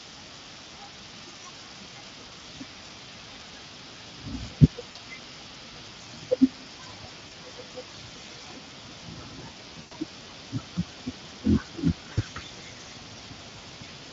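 A speech recording carrying the Speex codec for its whole length, with codec damage that is plainly audible: the CELP coder has too few bits to model the excitation accurately, so the voice takes on a hoarse, noisy texture, and any content above 8 kHz sounds like a shaped hiss rather than real detail. The degree of roughness points to a setting of roughly 20 kbps. On top of that, five short gaps show VoIP packet loss concealed by the speech codec, at 2.29 to 2.32 s, 4.91 to 4.98 s, 7.27 to 7.35 s, 9.81 to 9.93 s and 12.13 to 12.20 s. Missing audio runs from 20 ms for the first gap up to 100 ms for the fourth, consistent with whole 20 ms frames going missing. At each gap the decoder keeps repeating its last pitch and spectral envelope at falling gain, so the sound smears into a buzzy or coloured tail that fades. Because each decoded frame depends on the previous one, the voice stays weak or distorted for a short stretch after packets resume.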